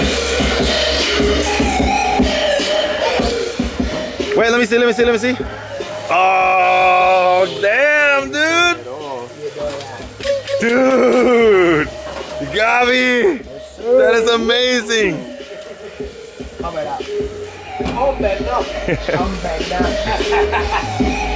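No technical faults can be heard in this clip.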